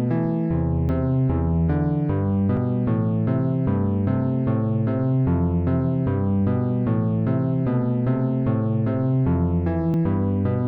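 At 0.89 s, 2.57 s and 9.94 s the sound jumps forward, no gap, just a hard splice where a chunk of audio has gone missing. The one at 2.57 s loses a bit more, around twenty milliseconds, against roughly ten for the others. That pattern is most likely a dropped buffer (overrun): the capture side didn't fetch its samples in time, the hardware wrote over them, and the two ends got stitched together.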